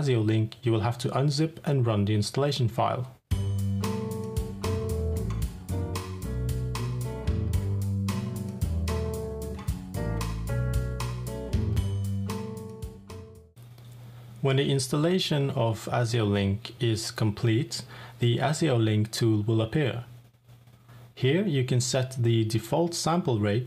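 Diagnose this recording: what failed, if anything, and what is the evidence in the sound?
Nothing failed at any stage of the chain in this recording. No dropouts, discontinuities, distortion or other fault can be heard anywhere in the audio.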